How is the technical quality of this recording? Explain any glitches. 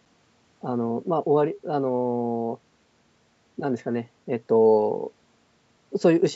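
No glitches in this speech recording: it has gone through a call's microphone processing, so the lowest bass is trimmed and nothing extends above 8 kHz, which is expected for that path rather than a defect.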